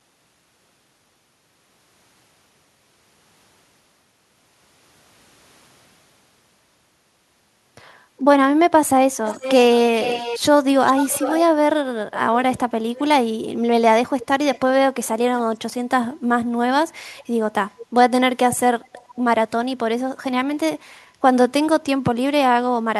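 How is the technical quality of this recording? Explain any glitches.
The recording has one recurring problem, an echo leak. It appears at 9.25–11.42, 12.55–13.01, 14.19–15.06, 17.20–17.24, 17.77–17.86 and 18.51–19.19 s. A copy of the speech returns 436 ms late, likely from a loudspeaker-side echo canceller letting pickup through. It is about 10 dB below the speech at first, then fainter and scrappier.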